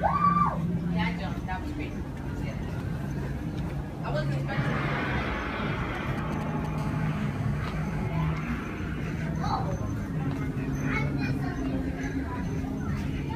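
From 5.95 to 6.67 s there are GSM signalling bursts: a galloping dit-dit-dit of short buzzes, repeating at 216.7 Hz and sitting roughly 10 dB under the sound. That's a nearby 2G phone firing off brief groups of radio bursts, the way one does before a call or a text comes in. Something in the audio chain rectifies the RF and turns each group into audible buzz.

Shortly after, from 6.78 to 8.08 s, it becomes a proper GSM phone buzz. Once the handset is in a call, it transmits continuously at 216.7 bursts per second. The same rectification turns that into a raspy 217 Hz tone packed with harmonics, about 18 dB below the sound and unrelated to it.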